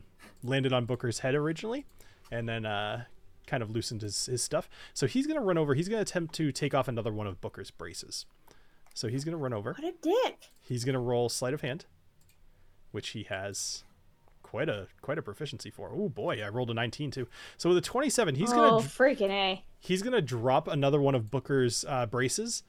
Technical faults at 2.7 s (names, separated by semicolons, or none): none